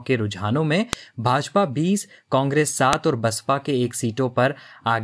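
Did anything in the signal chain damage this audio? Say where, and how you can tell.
Yes: a file header played as audio, from storage. Sharp clicks at 0.93 and 2.93 s, exactly 2 s apart, mark joined WAV pieces; unlike codec or dropout clicks, they ignore the signal.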